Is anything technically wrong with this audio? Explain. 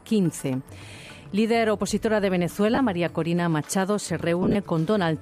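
Yes. Lost LE Audio frames at 2.75–2.78 s and 4.43–4.56 s: the LC3 decoder covered each gap by reusing the last spectrum with randomised signs. The first gap lasts 30 ms, consistent with three 10 ms frames. The second scatters short dropouts across 120 ms. Both smear tones into a brief noisy hiss.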